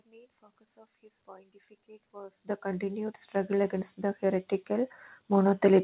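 From 2.12 s to the end of the clip, automatic gain rising occurs: the gain control judges the input too quiet and steadily increases its gain. The speech and the background noise swell together, growing gradually louder over several seconds within the band-limited, telephone-like sound.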